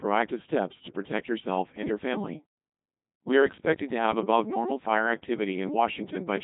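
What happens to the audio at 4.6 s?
At 4.6 s, as through the whole clip, one channel runs late by roughly 3 ms, and when the two are summed to mono the shared content cancels at evenly spaced frequencies. This channel delay (comb filtering) cuts a first notch at around 200 Hz, with further fixed notches repeating up the spectrum. The result is hollow and phasey, giving the speech a tube-like colour.

The speech has also been carried through a Codec 2 vocoder. Rather than keeping the waveform, the codec sends only pitch, voicing, energy and a coarse spectral envelope, and the decoder rebuilds the voice from sine waves. The heavy damage points to a very low rate of around 2.4 kbit/s. The speech comes out robotic and buzzy, with nothing above 3.8 kHz.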